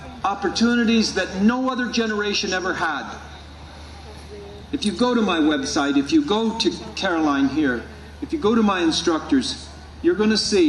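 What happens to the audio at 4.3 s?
Nothing goes wrong at 4.3 s; the audio plays through that moment intact, with no dropout, click, glitch or other fault.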